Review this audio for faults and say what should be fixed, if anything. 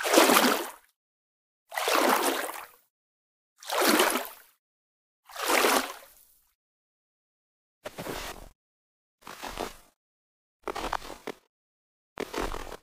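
From 8.15 s to the end, the sound leaps an octave with a 23.4 Hz flutter. That's planar audio read as interleaved: each 42.67 ms block, which fits 2048 samples, plays left then right at double speed. To prevent it, make the reader's channel layout match the planar format the source delivers.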